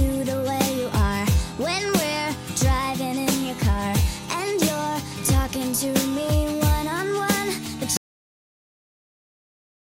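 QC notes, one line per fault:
7.97 s to the end: audio dropout to silence. The input was likely lost, through a disconnected device or failed link, while recording carried on writing silence, so the sound cuts off mid-flow into silence with no room tone, and nothing returns before the clip ends.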